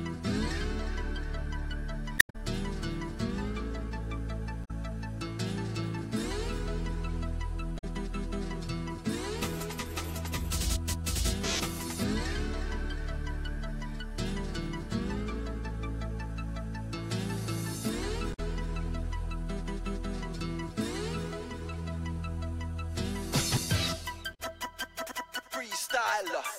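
The audio has damaged data in its compressed stream at five points: 2.18 to 2.35 s, 4.64 to 4.71 s, 7.77 to 7.84 s, 18.33 to 18.40 s, and 24.33 to 24.40 s. Each is a brief, harsh blip where the decoder misreads corrupted frames and loses sync. It then hunts for the next valid frame header. The first burst is the longest and adds about 26 ms of extra time to the audio.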